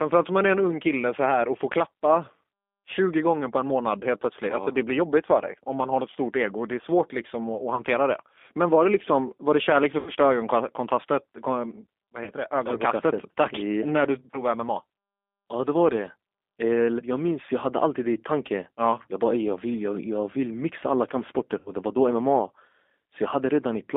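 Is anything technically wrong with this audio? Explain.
Yes. Throughout, the speech sounds thin, slightly rough and synthetic, with no bass below about 250 Hz and nothing above about 3.6 kHz. That is the G.729 codec at 8 kbit/s. It rebuilds each short frame from a vocal tract filter, a pitch predictor and a few pulses rather than keeping the waveform, so the voice comes out intelligible but plainly coarse, boxed into a narrow telephone band.

There are five brief glitches where the voice smears into a buzzy tone or coloured noise that fades before recovering: 7.75 to 7.82 s, 9.99 to 10.11 s (after "var det kärlek för"), 12.24 to 12.30 s, 14.31 to 14.42 s (after "tack yeah när du"), and 21.59 to 21.73 s (between "jag vill mixa alla" and "det var då"). This is VoIP packet loss concealed by the speech codec. Each gap points to roughly 20 to 80 ms of missing audio. The decoder filled it by repeating its last pitch and filter at falling gain, and the voice stays weak for a moment afterwards.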